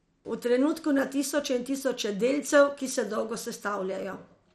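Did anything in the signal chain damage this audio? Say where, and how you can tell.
Yes: throughout, the speech sounds dull and gurgling, with nothing above 14.2 kHz; likely codec-stage MP2 compression starving upper sub-bands, fitting about 64 kbps.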